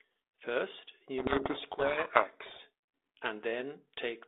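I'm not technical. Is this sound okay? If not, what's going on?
No. From 1.18 to 2.61 s the speech is buried under harsh, grinding distortion, then it clears. This is a codec payload misread. The phone-style compression here turns speech into compact codes, and for that stretch the receiving end read each code's bits in the wrong order, producing garbage. Ordinary compression damage sits lightly under the speech throughout. This distortion starts and stops abruptly and swamps the speech.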